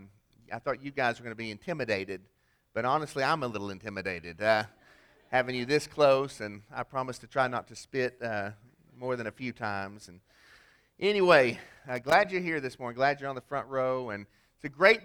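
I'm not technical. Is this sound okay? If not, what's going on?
No. A worn or dirty plug contact kept cutting in and out, causing loose connector crackle: a half-second burst of scratchy crackling from 11.74 to 12.25 seconds.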